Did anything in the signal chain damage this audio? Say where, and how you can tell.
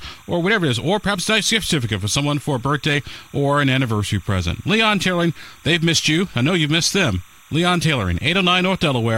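Yes, in the analogue wiring. Timecode bleed sits under the speech throughout: a chirping warble about 30 dB down, flipping between roughly 1 kHz and 2 kHz at a 30-frame rhythm. Unlike a steady whistle or hum, its pitch keeps switching as the code bits change.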